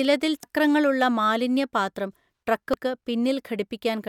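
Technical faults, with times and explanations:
0.43 s and 2.74 s: damaged data in a compressed stream. Part of the encoded speech was corrupted at each point. The decoder misread those frames and lost sync, hunting for the next valid header. Each spot is a brief chirp or blip.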